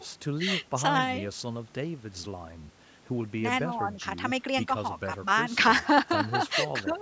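No technical faults can be heard in this speech.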